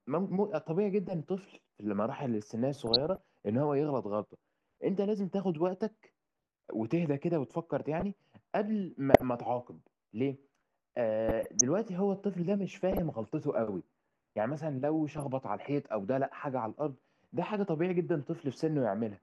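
DAB burbling breaks into the speech at 2.79 to 3.18 s, 7.50 to 8.03 s, 9.14 to 9.22 s, 11.29 to 11.61 s, 12.92 to 13.11 s and 15.09 to 15.22 s. Under weak reception, a fraction of a percent of bit errors slip past error correction and corrupt sub-band samples and levels, giving short blips of noise and brief jumps in level. A spectrogram shows isolated rectangular blocks flaring or dropping frame by frame, and the waveform shows brief irregular swells.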